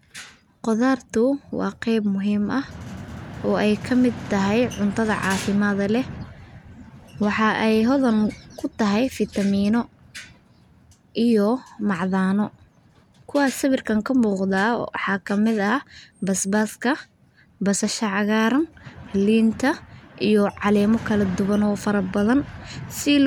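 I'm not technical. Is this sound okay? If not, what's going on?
Yes, it sounds fine; nothing wrong to report.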